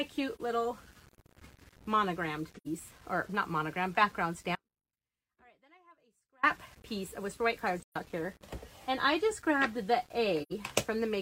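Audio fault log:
Throughout: low bit depth without dither. A grainy, rough distortion rides on the sound and shifts with it, heaviest where the level falls, with the error sitting roughly 30 dB below the signal. The likely cause is rounding to about 8 bits with no dither. That explains why the grit tracks the signal instead of forming a steady hiss. A dithered signal would carry a constant, even noise floor.
0.35–0.41 s, 2.56–2.67 s, 7.83–7.97 s, 10.42–10.52 s: AAC frame loss with muting. Short holes of about 43 ms, 85 ms, 128 ms and 85 ms, each faded out and back in over soft edges. The lengths step in multiples of about 43 ms, which fits whole AAC frames being lost and zeroed by the decoder. The overlapping windows smooth the edges, unlike the hard cut of a dropout.
4.56–6.43 s: audio dropout to a faint residue. The sound drops out abruptly for about 1.9 s and returns just as suddenly. 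Across the gap only a faint trace of it remains, about 35 dB below normal level, rather than true silence. The likely cause is a lost signal feed while the path downstream stayed live, so some leakage carried through. The sharp edges and long duration separate it from the soft, brief frame-loss holes.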